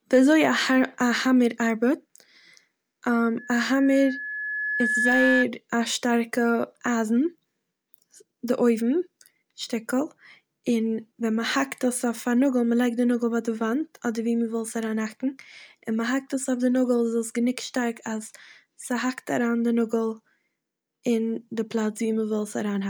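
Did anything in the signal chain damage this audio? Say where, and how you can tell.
Yes. Loudspeaker feedback squeal from 3.38 to 5.46 s, ending just before "א שטארקע אייזן". A 1.7 kHz tone swells over roughly a second and a half to about 5 dB above the speech: the microphone is hearing its own loudspeaker, and loop gain exceeds unity at that frequency.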